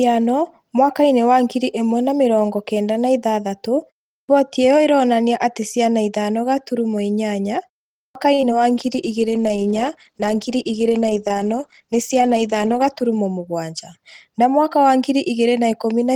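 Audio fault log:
4.14 to 4.29 s and 7.99 to 8.15 s: clipped start after a pause. Each time the speech begins abruptly out of silence, without its first sounds. Before these onsets the pauses last 0.31 s and 0.38 s. The output device seems to drop into an idle state during that silence and takes time to come back. About 149 ms is swallowed at the first onset and about 162 ms at the second.
8.34 to 8.39 s: short stall from a late packet. A sound is held for 36 ms longer than it should be. The next packet came in late and the jitter buffer ran dry. The receiver kept the last sound going until the data arrived, then carried on from the same point. Nothing is lost. The added hold gives a faint buzz or dip and pushes the delay up by 36 ms.
8.41 to 8.43 s and 8.50 s: short concealed packet loss. There are two tiny smears right after the stall. Each time, 10 ms of audio never reached the decoder in time. 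The receiver filled the gap by extending the preceding sound, using 15 ms of fill the first time and 4 ms the second, then blended back into the real signal. The result is a brief smear or wobble rather than a clear dropout.
8.71 to 13.14 s: call bitrate drop. The encoder's rate halves from 32 kbps to 16 kbps and stays at the lower rate for 4.4 s. A falling bandwidth estimate made the encoder spend fewer bits. The coding becomes coarser. The speech turns rougher and more watery for that stretch. It clears once the rate recovers near the end of the range.
12.34 to 12.88 s: jitter buffer speed-up. Inside the low-bitrate stretch, the speech runs at 107 percent of its normal pace while the pitch stays unchanged. The buffer was holding more audio than its target. To trim the delay, the receiver cut out short pitch-period pieces many times in a row, removing about 50 ms in total. The effect is a slightly hurried delivery.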